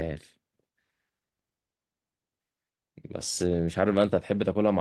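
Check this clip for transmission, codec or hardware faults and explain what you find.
The speech signal shows no transmission, codec or hardware faults anywhere in the recording.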